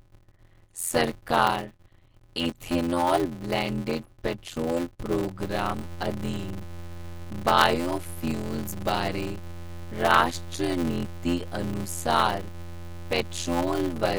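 From the start of the clip, a block size mismatch (padded) is at work. One stage hands over blocks shorter than the next stage reads, and the remainder of each block is zero-filled. The 86.1 Hz block rate fits a 512-sample read buffer at 44.1 kHz, with only about 320 samples of real audio in each block. Each block ends in a short silence, producing a steady 86.1 Hz buzz through the speech. The stretched-out delivery plays at 0.625 times normal speed while keeping its timbre.

At 5.40 s a DC step occurs. The waveform's zero line suddenly shifts to a new offset, as when a converter recalibrates or an input carrying an offset is switched in. The offset then holds until the clip ends at about 14 s. The jump is heard as a single low thump at 5.40 s. The speech carries on unchanged across it, still with the block-rate buzz and slowed pace.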